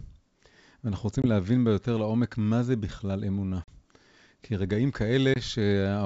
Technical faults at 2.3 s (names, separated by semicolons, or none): none